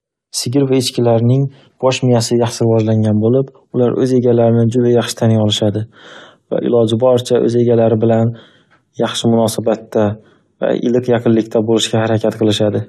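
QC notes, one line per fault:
No faults found in this speech clip. Nothing here needs a QC note.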